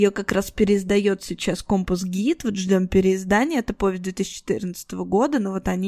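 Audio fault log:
No faults can be heard anywhere in this recording.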